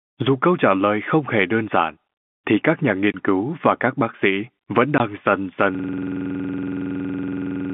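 Two brief holes of silence cut into the speech, each 20 ms long. The first runs from 3.12 to 3.14 s, between "giản thì các nhà" and "cứu và các bác". The second runs from 4.98 to 5.00 s, right after "các bác sĩ vẫn". This is packet loss filled with silence: one packet went missing each time, and the receiver played nothing in its place, leaving hard-edged gaps.

From 5.75 s to the end, a single 46.44 ms fragment repeats about 43 times, at 21.5 times a second. This is a system hang loop. The computer or driver froze while the sound hardware kept replaying the same ring buffer, whose length fits a 2048-sample buffer. All of this sits on a G.711 telephone line, band-limited to roughly 150 Hz to 3.5 kHz.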